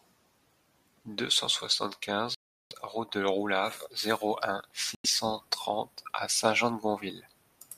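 Speech that drops to dead silence twice, at 2.35 to 2.73 s and 4.95 to 5.06 s, for about 0.36 and 0.09 s, likely a Bluetooth stall where the headphone buffer ran dry. The waveform flatlines and the spectrogram shows blank vertical bands.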